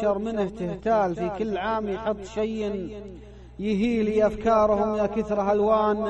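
Nothing in the audio stood out as a technical problem on listening.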